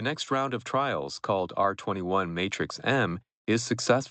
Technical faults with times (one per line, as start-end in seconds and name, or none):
0.27-4.11 automatic gain rising